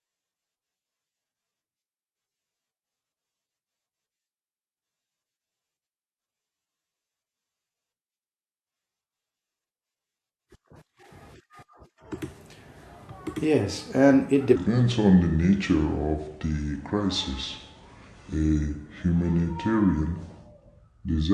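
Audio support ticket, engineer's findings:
Speech drops low and slow from 14.56 s to the end at 21.34 s, with pitch down about 5.5 semitones and pace at 0.73x. Wrong sample rate at the playback stage: samples clocked out slower than captured, no resampling. The ratio fits 44.1 kHz material played at 32 kHz.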